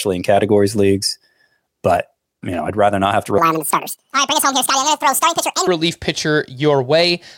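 Right after "rather not have to", from 3.38 s to 5.67 s, a section at the wrong speed plays back at 1.78 times normal rate, pitch rising by roughly ten semitones. The speech turns high and hurried, most likely from being clocked at the wrong rate.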